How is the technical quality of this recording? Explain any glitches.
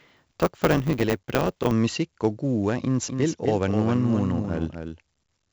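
The technical quality is poor: the speech carries coding grit from start to finish, the opening runs fast with a buzz, and the final stretch plays twice.

The 4-bit ADPCM compression runs through the whole clip. Each sample is coded as a coarse step from a predicted value, so the error rides as a hiss that rises and falls with the speech rather than sitting at a steady floor, as tape or mic hiss would. The damage is heavy, with gritty edges on loud syllables and smeared consonant attacks where the step size lags. Nothing reaches above 8 kHz, which dulls the top end and fits a stream of about 64 kbps.

From 0 to 1.72 s there is a block size mismatch (truncated), ending just before "om musikk og gode". One stage hands over blocks longer than the next one reads, so the tail of each block is dropped. That leaves a 100 Hz buzz at the block rate and makes the speech run 1.09 times fast. Unlike a resampling error, the pitch stays about normal and only the pace hurries.

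From 3.09 s to the end, just after "om musikk og gode", there is a doubled audio track. A second full-band copy of the speech trails by about 300 ms at roughly 5 dB below the original. It is likely captured again through a slower path. It differs from a room echo because the copy has no decay or reverberant colour, and it differs from flutter echo because it repeats only once. It also switches in abruptly rather than building up.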